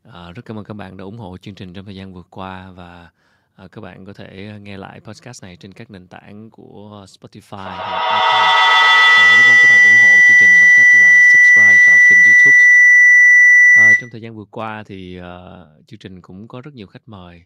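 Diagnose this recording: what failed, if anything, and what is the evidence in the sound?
A shrill tone near 2 kHz swells from 7.57 s to 14.23 s, with the loop repeating roughly every 150 ms and peaking about 22 dB above the speech. This is feedback howl in the call path: two devices in one room re-amplify the sound on each microphone-to-loudspeaker trip.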